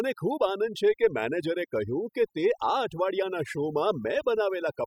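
A speech recording with overdone noise removal running through the whole clip. The denoiser is set too aggressively, so any frequency band close to its noise estimate is pulled far down or gated off entirely. Between phrases the background collapses to near silence scattered with twinkling specks, and the quieter parts of the voice are stripped away along with the noise.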